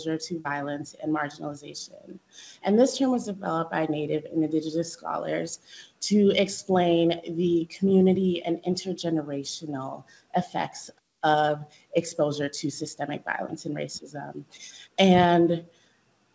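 No technical faults heard.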